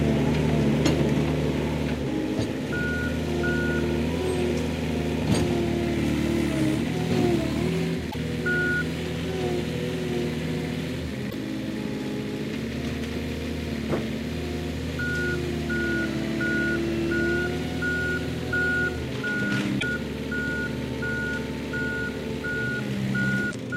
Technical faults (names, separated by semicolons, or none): damaged data in a compressed stream